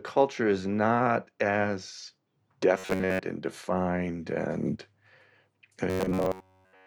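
Robotic sound from repeated short buffers at 2.79 to 3.19 s, just before "and defined and", and 5.90 to 6.86 s: a rigid metallic buzz near 94 Hz, likely from about 10.7 ms chunks looping while most of the real audio is skipped.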